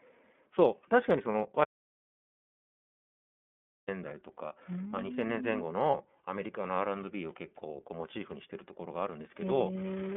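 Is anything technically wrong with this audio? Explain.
Yes, a few things. The whole clip is coded with the iLBC codec. It's narrowband, with the line cut off around 3.5 kHz, and the speech has a rough, slightly synthetic edge that fits the 13.3 kbps, 30 ms-frame mode.

Lost iLBC frames show up at 1.32 to 1.35 s and again at 5.90 to 5.95 s, about 30 ms each, which points to a single dropped frame both times. The decoder fills each gap by repeating the last pitch cycle, so you hear a brief buzzy held vowel before the speech snaps back.

There's an audio dropout to silence from 1.64 to 3.88 s, roughly 2.2 s of silence with no room tone at all. The input was likely lost while recording carried on, so the speech cuts off mid-flow and whatever came in that stretch is gone.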